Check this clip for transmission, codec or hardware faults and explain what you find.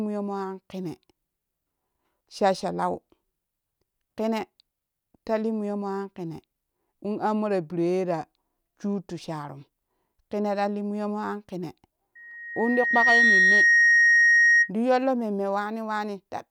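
There is one fault in this speech clip, a loudspeaker feedback squeal, between 12.15 s and 14.71 s. A pure tone near 1.9 kHz swells over about a second until it sits roughly 10 dB above the speech, then stops just before "ti yollo mumme". The microphone was picking up the loudspeaker it drives, and at 1.9 kHz the loop gain went above one, so that frequency fed on itself and grew.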